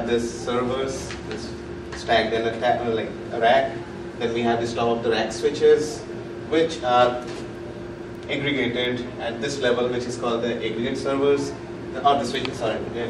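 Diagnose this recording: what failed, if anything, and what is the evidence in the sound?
Unlocked digital-input clocking, drifting roughly 30 ppm, causes word clock ticks: clicks every 0.7 s from 0.46 to 13.05 s, each fitting a one-sample slip.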